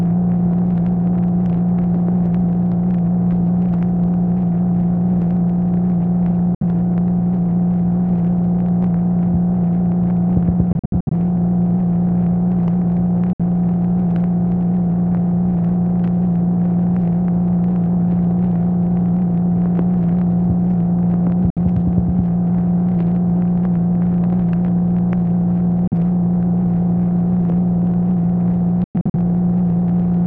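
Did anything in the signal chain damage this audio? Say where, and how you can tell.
Yes, at playback, and it's likely a Bluetooth dropout. Silent holes of 43 to 64 ms hit at 6.55, 13.33, 21.50 and 25.87 s, with choppier clusters at 10.73 to 11.13 s and 28.84 to 29.15 s. Late packets got discarded, and the sound picks up as if it had played on.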